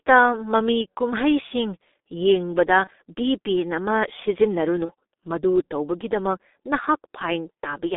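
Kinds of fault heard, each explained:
G.723.1 codec: The speech sounds muffled and hoarse throughout, with smeared consonants and a thin, boxy tone. The band runs only from about 250 Hz to 3.7 kHz, so sibilance and low body are both gone. This is a low-rate internet-telephony codec working in 30 ms frames, and the heavy coarseness fits its 6.3 kbit/s mode, where the vocal model is updated too slowly to follow quick articulation.
VoIP packet loss concealed by the speech codec: Twice the speech briefly turns into a stretched, fading smear, at 2.84 to 2.90 s and at 4.85 to 4.91 s, each lasting about 55 ms. Each gap fits a single lost 30 ms frame. The decoder filled it by repeating its last pitch and spectral shape at falling gain. Because each frame builds on the one before, the distortion carries on briefly after the packets resume.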